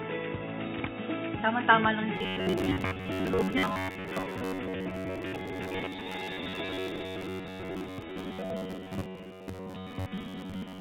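From 2.16 s to the end, robotic sound from repeated short buffers: a rigid metallic buzz near 94 Hz, likely from looping roughly 11 ms chunks. Unlike steady hum, it tracks the sound's rhythm.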